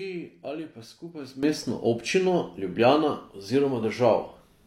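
A sudden gain jump at 1.43 s raises speech and background noise together by about 12 dB to the end, likely an unramped gain change.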